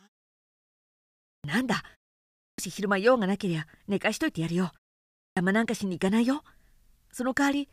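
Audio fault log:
0.0–1.13 s, one channel inverted: the speech nearly disappears, sitting about 31 dB low as a faint residue. The likely cause is one stereo channel with reversed polarity, so the content shared by both channels cancels when they are summed to mono.
1.33 s, 2.48 s and 5.26 s, clipped start after a pause: speech jumps in abruptly out of silence with its opening sounds missing, about 111, 104 and 106 ms lost after pauses of 1.33, 0.6 and 0.56 s. The output device sleeps during silence and takes that long to wake.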